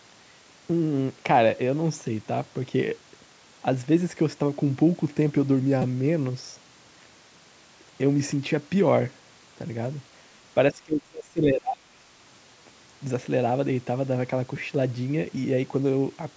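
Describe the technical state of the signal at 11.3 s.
At 11.3 s the speech is suppressed in double talk, from 10.71 to 12.06 s. The level sinks sharply, by roughly 30 dB at its deepest. The echo canceller likely mistook the near talker for loudspeaker echo while both sides spoke, and turned both down.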